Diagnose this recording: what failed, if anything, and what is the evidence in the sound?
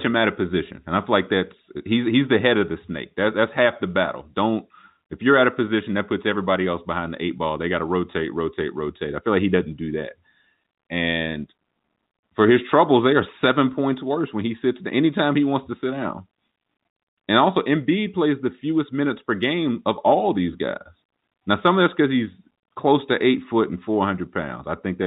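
Nothing stood out on listening to this speech recording, which carries the narrow band of ordinary telephone audio.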